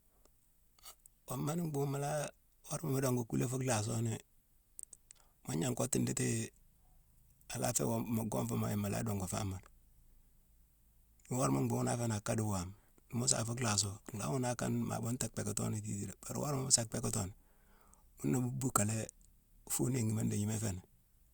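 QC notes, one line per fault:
No faults heard in the speech. Nothing here calls for a QC note.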